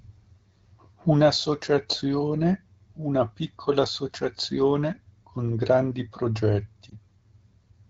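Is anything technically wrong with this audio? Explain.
Yes. Around 6.89 to 6.96 s there is a lost AMR speech frame. Corrupted radio data failed the frame's checksum, so the AMR-WB decoder filled the gap by repeating the previous frame's pitch and vocal tract settings at reduced gain. The result is a brief dip or warble, which fits a single lost 20 ms frame. What separates this from a plain network dropout is that the sound is smeared and continued rather than cut to silence or clicking.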